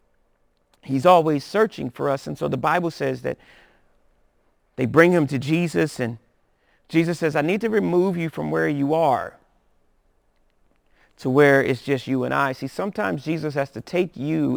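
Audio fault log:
Throughout: crude rate conversion. The speech sounds as if it was moved from a 48 kHz rate to 44.1 kHz by simply picking the nearest sample, with no filtering, so samples are periodically dropped or duplicated in a fixed pattern. That timing error adds faint inharmonic tones, roughly 30 dB below the speech, heard as a gritty fizz riding on louder and brighter syllables. A spectrogram shows faint stray lines unrelated to the voice's harmonics, and a zoomed waveform shows tiny regular steps.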